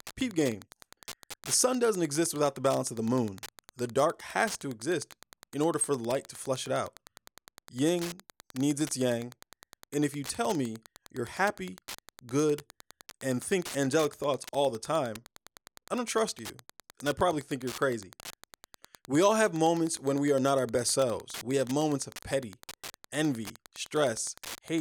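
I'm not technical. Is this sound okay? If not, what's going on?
No. Wi-Fi interference runs from start to finish under the speech. A Wi-Fi radio sitting close to the recording equipment sends out a short signal every 102.4 milliseconds, and the audio circuit picks it up as if it were sound. That gives a steady ticking, roughly ten ticks a second, that never stops. It sits beneath the speech rather than drowning it out. Moving the Wi-Fi device away from the equipment typically cures it.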